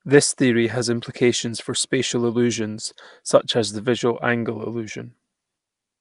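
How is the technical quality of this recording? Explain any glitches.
The recording's technical quality is compromised throughout by plainly audible codec damage. Nellymoser compression runs from start to finish: the speech carries a rough, hissy halo and a smeared, underwater quality, with nothing above 10.6 kHz. The likely cause is the Nellymoser Asao codec, the old Flash microphone codec, which fits a rate of roughly 44 kbps. It codes short blocks at a fixed, very low bit budget, so weaker frequency bands get no bits and are replaced with noise, producing that grainy, washed texture.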